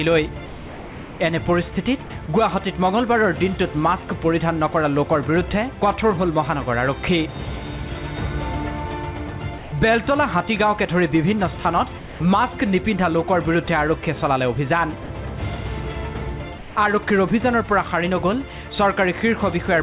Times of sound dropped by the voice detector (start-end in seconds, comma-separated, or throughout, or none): 0.46-1.20, 2.04-2.28, 9.58-9.72, 11.98-12.20, 15.04-15.10, 16.58-16.76